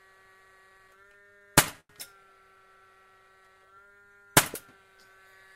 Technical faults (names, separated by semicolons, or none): repeated stalls (stutter); jitter buffer slow-down